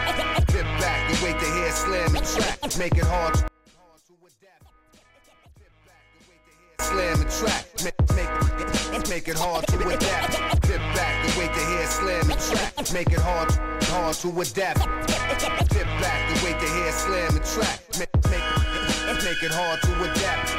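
The audio collapses between 3.48 and 6.79 s. Its level drops by about 32 dB. Centred content and low end nearly disappear. What remains is a faint residue. The likely cause is one channel inverted. One stereo channel has its polarity flipped, so anything shared by both channels cancels when they are summed to mono. Only the small difference between left and right survives.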